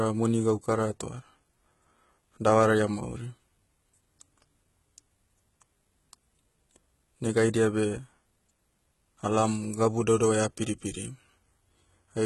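Heavy HE-AAC compression likely affects this speech recording throughout, at what sounds like a very low bitrate around 16 kbps. The upper spectrum is rebuilt by copying lower bands, so sibilants turn gritty and metallic, with nothing above 11.8 kHz.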